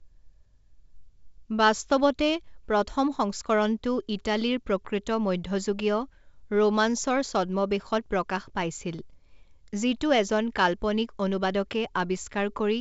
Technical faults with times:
none

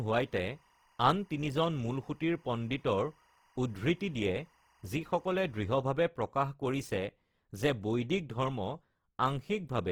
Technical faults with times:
0.00-9.91 Opus compression
0.00-5.74 timecode bleed

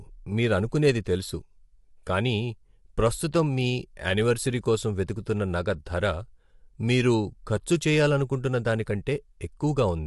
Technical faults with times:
0.00-10.06 low-delay AAC compression

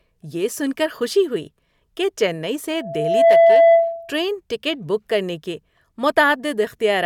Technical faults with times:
2.73-4.18 loudspeaker feedback squeal

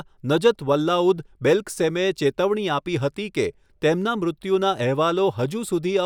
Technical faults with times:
none

